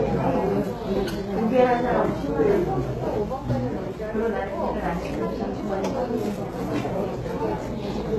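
From start to finish, the treble has a gritty, metallic sheen. Nothing reaches above 12.3 kHz. The top band sounds bright but synthetic. Its fine detail doesn't match the material beneath it. This is likely HE-AAC compression at a very low bitrate, one that fits around 16 kbps. Only the lower spectrum is truly coded. The highs are rebuilt by copying lower bands upward and shaping them coarsely. The copied harmonics clash across that seam, and the damage is plainly audible.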